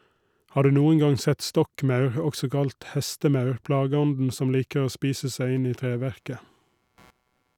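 A speech clip with a faint buzzing, chirping texture entering at 5.56 s, right after "spise seg", and running to 7.56 s, pulsing at around 150 times a second and roughly 40 dB below the speech. This is computer activity noise: processor or graphics load shifting the shared ground under the audio circuit.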